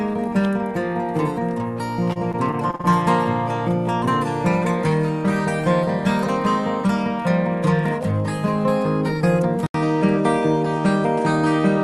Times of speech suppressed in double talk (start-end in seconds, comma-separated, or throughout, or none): none